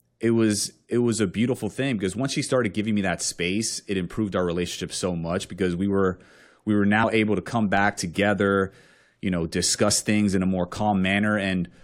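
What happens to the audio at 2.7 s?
Nothing goes wrong at 2.7 s; the speech runs through that moment with no dropout, click, distortion or other audible fault.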